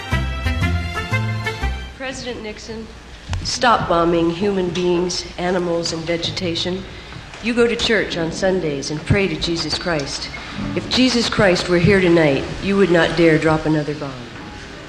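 No technical faults can be heard anywhere here.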